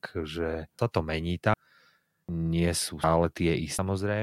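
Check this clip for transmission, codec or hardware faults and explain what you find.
The speech has one fault type, audio missing between chunks, at 0.79, 1.54, 2.29, 3.04 and 3.79 s. Roughly a third of a second vanishes each time and the sides butt together with no silence, unlike a dropout's gap. The likely cause is 1-second chunks losing audio at every handover.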